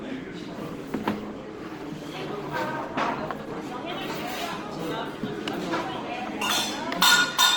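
A likely low-bitrate Opus compression in music mode, consistent with about 16 kbps, leaves these sounds grainy, rough and noisy throughout, though content still reaches about 20.3 kHz.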